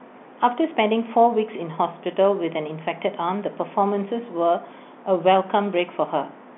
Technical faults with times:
none

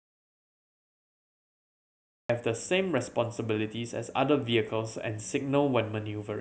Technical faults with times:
0.00-2.29 audio dropout to silence

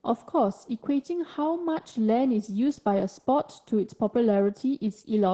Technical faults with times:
0.00-5.33 Opus voice compression

